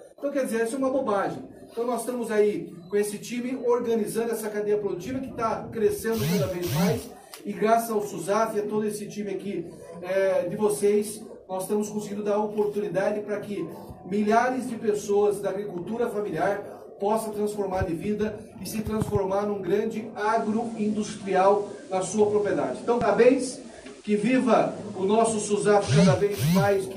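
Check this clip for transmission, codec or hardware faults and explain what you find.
One fault is present. Digital radio blending to analogue, 20.14 to 26.40 s: digital reception dropped and a 260 ms cross-fade switched to FM, adding hiss roughly 30 dB down and shifting level about 3 dB.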